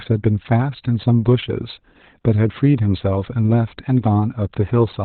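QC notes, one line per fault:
throughout: Opus voice compression. The speech sounds muffled, hoarse and slightly robotic, with nothing above 4.2 kHz. Opus's SILK linear-prediction coder has cut the signal to narrowband and coded the excitation coarsely. Damage this heavy fits a bitrate near 8 kbps.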